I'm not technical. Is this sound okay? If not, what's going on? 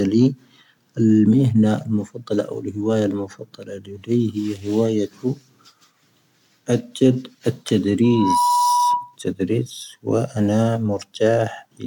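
No. From 8.04 to 9.16 s there is loudspeaker feedback squeal. The microphone hears its own loudspeaker, and a 972 Hz tone swells up within a split second.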